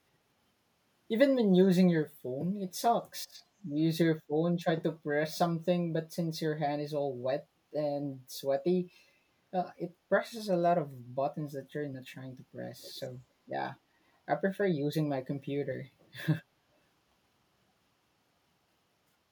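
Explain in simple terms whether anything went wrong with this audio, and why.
From 12.79 to 13.09 seconds, a faint, delayed copy of the speech trails about a quarter of a second behind it. This is an echo leak: likely, one side's loudspeaker was picked up by its microphone, and the echo canceller let some of it back through.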